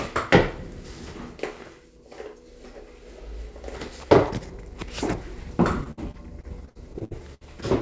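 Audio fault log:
5.84–7.43 s: repeated packet loss (robotic sound). About a dozen holes up to 65 ms are patched with copied sound, showing as smeared repeating blocks on the spectrogram.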